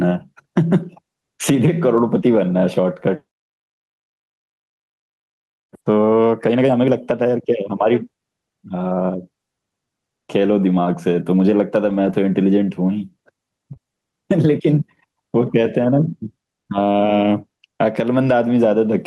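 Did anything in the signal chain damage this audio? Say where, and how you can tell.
Yes. Gain pumping runs throughout, likely from call-processing gain set too high: a fast limiter pulls the gain down on loud sounds, swinging it about 10 dB and squashing loud and soft parts closer in level, seen as a breathing waveform envelope.

Lost packets rebuilt from error correction, a network and codec problem, affect 2.21–2.23 s, 6.91–6.93 s and 11.85–12.15 s. The low-bitrate copies sound rougher, and the spectrogram shows a grainier, noisier texture there.

Short concealed packet loss at 13.73–13.77 s is also network damage. The receiver extended the previous sound for 20 ms, which appears as a brief smeared patch.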